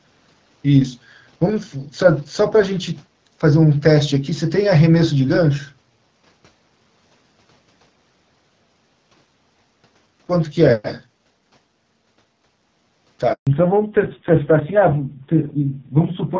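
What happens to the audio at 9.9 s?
At 9.9 s the speech carries on intact, with nothing breaking into it beyond the steady wideband character of the call path it passes through.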